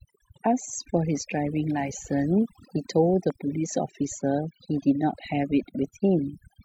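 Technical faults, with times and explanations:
Throughout, overdone noise removal: a noise reducer set far too aggressively shuts off individual frequency bands whenever they sink near its noise estimate, taking softer parts of the speech with them. The gaps between speech drop to near silence with twinkling specks. On a spectrogram the background is blank but for scattered isolated dots, and the speech has ragged, holed edges.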